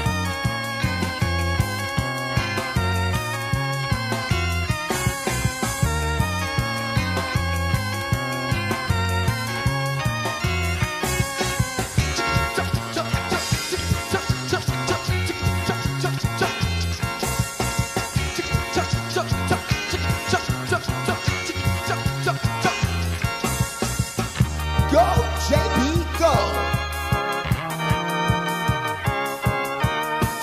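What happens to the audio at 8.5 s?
At 8.5 s the audio plays through cleanly, with no dropout, click, distortion or other fault to be heard at that point.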